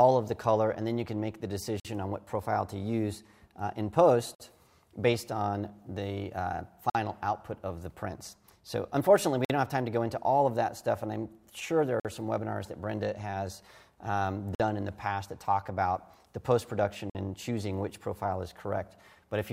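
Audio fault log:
1.80 to 17.15 s, gap between chunks: seven hard-edged 50 ms holes at 1.80–1.85, 4.35–4.40, 6.90–6.95, 9.45–9.50, 12.00–12.05, 14.55–14.60 and 17.10–17.15 s. The audio arrives in 2.5 s blocks, and each new block starts 50 ms late, leaving dead air at every join. The sound on either side continues intact, so it stutters at a steady 2.55 s rhythm.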